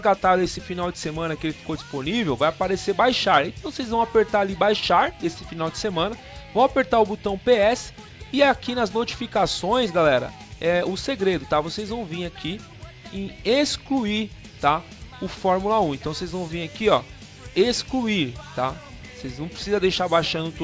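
No faults can be heard anywhere in the clip.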